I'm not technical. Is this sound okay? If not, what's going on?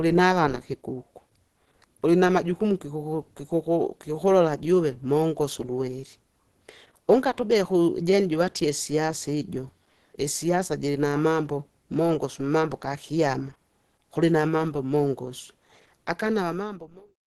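No. Throughout the clip the speech sounds plainly muffled and hoarse, with a grainy, rough texture. That points to heavy Opus compression, likely from squeezing the audio into a very small file or stream. To save space, the encoder drops detail and blends in speech-style processing, and everything above about 12 kHz is simply gone. That's why it lacks crispness. The gentle fade-out at the very end, from around 16 s to 17.2 s, sounds smooth.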